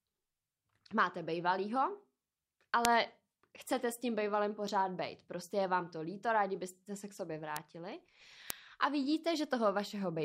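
Bit error spikes at 2.85 s, 7.57 s and 8.50 s interrupt this speech clip as single sharp, broadband ticks. Flipped bits make a few samples jump by a power of two to peaks of about -4, -10 and -4 dBFS, then snap back.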